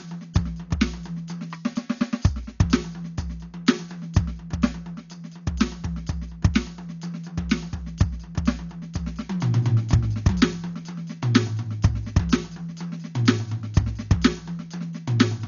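The music sounds dull and closed-in from start to finish, with nothing above 7 kHz, and sustained tones are surrounded by a rough, fluttering grain instead of clean harmonics. This is most likely heavy Dolby Digital compression. The narrowed band and the damage fit a bitrate around 48 kbps. At that rate the encoder drops the top of the spectrum and leaves many frequency lines without mantissa bits, so the decoder fills them with dither noise that churns around each tone.

Between 0.37 and 0.39 s, a single sharp loud pop cuts through the music, peaking roughly 10 dB above it, while the music carries on underneath. It is likely a sudden voltage step or pulse from a plug, switch, static discharge or driver glitch. That jolt was added straight onto the signal, and the circuitry after it shaped it into a brief, hard click.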